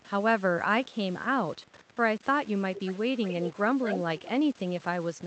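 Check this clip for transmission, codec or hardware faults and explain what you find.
Two faults are audible in this speech.

Low bit depth without dither runs throughout. Grainy distortion tracks the speech about 25 dB below it, which fits truncation to roughly 6 bits, likely without dither.

Echo leak occurs at 0.00, 1.66, 2.76, 3.26, 3.86 and 4.18 s. Residual loudspeaker pickup likely escaped cancellation and returns as a copy delayed 255 ms, then 222 ms. It rises from about 40 dB down to about 5 dB below the speech at 3.86 s.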